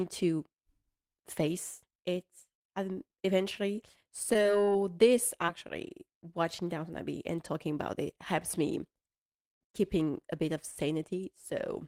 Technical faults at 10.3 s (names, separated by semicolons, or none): none